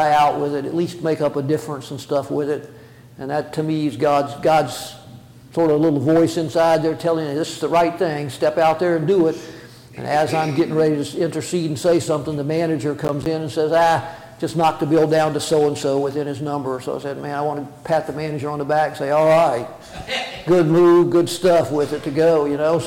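At 13.05 s there's a short burst of processor overload crackle running to about 13.26 s. The machine couldn't finish its audio buffers on time, and a handful of misses in a row each punched a hard-edged hole of silence, which fits buffers of around 10 ms, so it comes across as gritty tearing.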